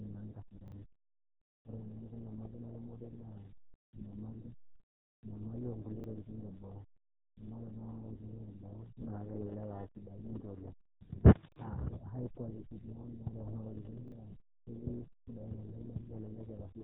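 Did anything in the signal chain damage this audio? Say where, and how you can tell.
Yes. RealAudio 14.4 codec damage runs throughout. Nothing passes above 3.9 kHz, and the speech is heavily muffled and gargly, which points to an 8 kbit/s dial-up codec stage.

Repeated buffer at 0.68, 6.0, 11.52 and 14.08 s. Each time, a 40 ms piece plays twice with a hard join. This is a playback underrun that fits a 40 ms buffer.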